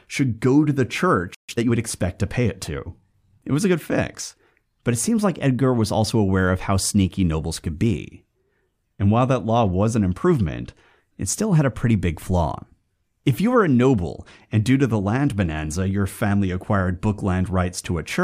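At 1.35 s the speech just drops out for about 140 ms, a playback stall, and it picks up again at 1.49 s. The likely cause is the player running dry of buffered data or its thread getting blocked briefly, so the output went silent mid-flow.

Right after, from 1.49 to 1.77 s, you get time-compressed catch-up: the player trims its backlog by snipping out and cross-fading small chunks, so the speech runs about 1.5 times fast, still at normal pitch.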